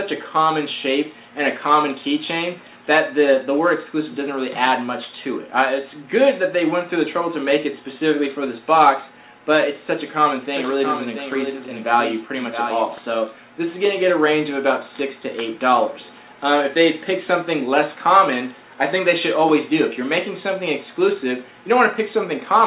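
From 10.42 to 12.98 s the audio carries a doubled audio track: a second full-band copy, about 5 dB quieter, trails roughly 0.7 s behind and starts and stops abruptly. It likely comes from the same signal being captured twice. Unlike an echo or reverb, it has no decay or room colour. Throughout, nothing reaches above 4 kHz, which fits a 64 kbit/s G.711 A-law call.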